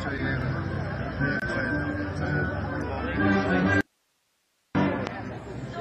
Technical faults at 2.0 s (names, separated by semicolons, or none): none